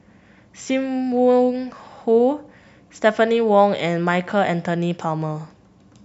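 Speech recording, with no technical fault to be heard anywhere in it. Nothing in the signal calls for a time or a cause to be noted.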